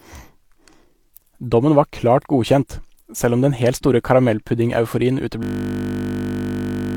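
A system hang loop starts at 5.43 s and runs to the end: a frozen system left the hardware replaying one 20 ms buffer, producing a steady 50 Hz buzz.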